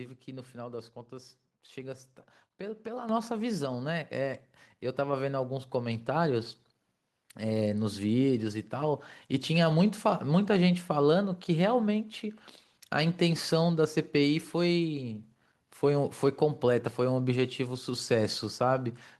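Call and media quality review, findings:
Microphone volume stepped up at 3.09 s: call software's input gain control raised device level in one step, about 7 dB; speech and background jump louder together.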